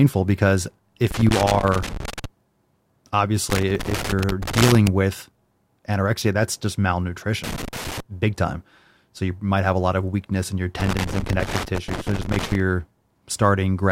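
Irregular bursts of crackle and scratching break up the speech from 1.07 to 2.25 s, 3.50 to 4.88 s, 7.44 to 8.00 s and 10.80 to 12.60 s. This is loose connector crackle: a worn or dirty contact intermittently breaking the signal path, chopping the audio.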